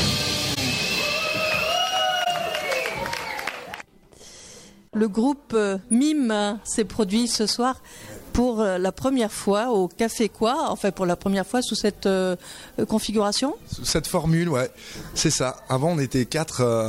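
At 0.54 s and again at 2.24 s there's a corrupt frame concealed by the decoder: each time a single damaged AAC frame, roughly 35 ms long, got patched over.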